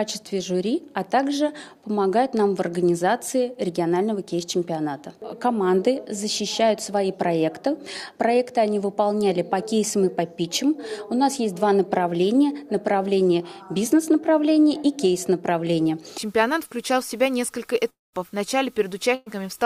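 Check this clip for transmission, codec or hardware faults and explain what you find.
Two transmission faults appear near the end of the clip.

From 17.89 to 18.16 s there is a long network dropout, likely caused by a stall in packet delivery. Roughly a quarter second of audio never arrives. The receiver stretches the last sound into a decaying buzz or hiss, which thins to silence before playback resumes past the lost portion.

From 19.15 to 19.29 s a burst of packet loss removes about 120 ms. Concealment holds the preceding sound and fades it across the gap without reaching silence, so a brief smeared tail bridges to audio that restarts slightly further on.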